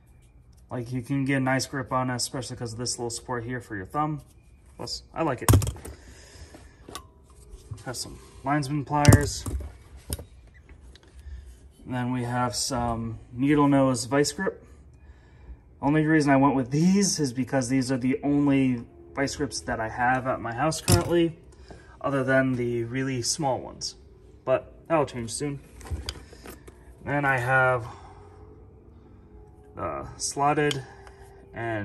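No technical faults can be heard anywhere in this audio. Nothing breaks into or disturbs the sound at any point.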